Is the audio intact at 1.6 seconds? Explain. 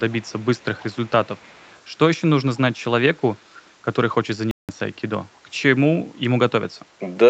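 No. Echo leak runs from 0.1 to 1.8 s: a faint copy of the speech returns about 0.3 s late, very low under the direct sound. The likely cause is a far-end loudspeaker whose echo canceller let residual pickup back into the call.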